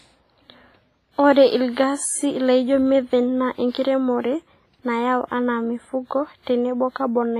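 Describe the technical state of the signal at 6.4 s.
Pre-echo runs from 6.42 to 6.47 s. A sharp attack falls late in a transform block, and the quantisation noise sized for that loud onset is smeared back about 50 ms into the quiet gap before it, so a brief hiss precedes the attack and its edge sounds softened.

Underneath sits WMA compression, likely the cause of the heavy damage throughout. Coarse quantisation on long blocks, consistent with a low bitrate near 24 kbps, zeroes weak spectral detail and leaves nothing above 15.5 kHz. The speech sounds ringing and washy, with hiss breathing alongside it.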